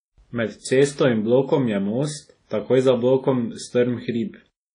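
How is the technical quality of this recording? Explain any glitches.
The technical quality is compromised throughout the speech by plainly audible codec damage. WMA compression, likely, runs the whole clip: nothing sounds above 10.1 kHz, and long-block quantisation smears ringing, washy hiss around the speech, which fits a low bitrate near 32 kbps.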